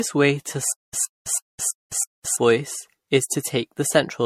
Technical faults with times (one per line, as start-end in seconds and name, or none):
0.00-4.26 generation loss
0.72-2.36 stutter with silent gaps